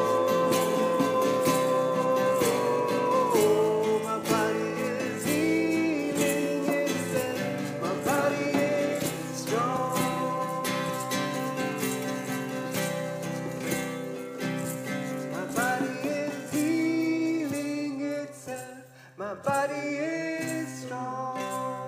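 No technical faults can be heard anywhere in the audio, with the signal staying continuous and steady throughout.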